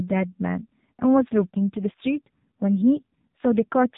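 From start to finish the speech carries AMR narrowband mobile codec damage, and it is heavy. Nothing above 3.8 kHz survives, so the sound is boxed into the telephone band with no air or sibilant detail. The encoder rebuilds the voice from a vocal-tract model excited by a handful of pulses per subframe, and with so few bits that excitation turns coarse, giving a buzzy, synthetic quality that points to one of AMR-NB's lower modes, around 6.7 kbps.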